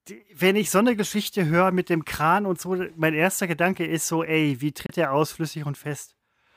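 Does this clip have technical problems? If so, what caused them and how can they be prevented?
Yes. After "ist so ey wie", the speech cuts to silence from 4.86 to 4.95 s, then resumes at "der aus". This is likely a Bluetooth dropout: late wireless packets were discarded. Keep the headphones close to the source and away from interference.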